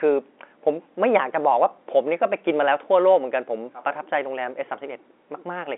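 No technical faults can be heard in the recording. It has the narrow band of ordinary G.711 telephone coding, with the line carrying roughly 250 Hz to 3.5 kHz and nothing above 3.8 kHz.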